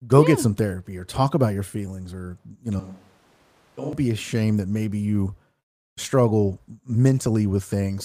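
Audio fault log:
2.80–3.93 s, switch to a distant microphone: The speech turns roomy and hollow at once, with thinner bass. The level falls by roughly 10 dB. Background noise rises to about 25 dB below the speech. The close signal has likely dropped out, leaving a microphone further away. That pickup hears more room reflections and less low end. The change happens abruptly at both edges, as one source replaces the other.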